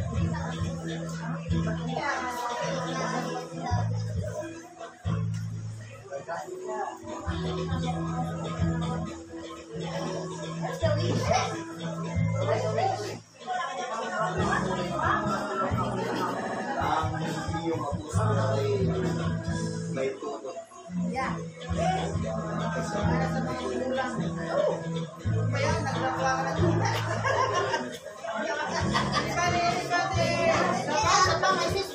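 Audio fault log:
16.41–16.61 s, repeated frames: a 69.7 ms chunk replays three extra times, giving a quick stutter and stretching the audio by 209 ms.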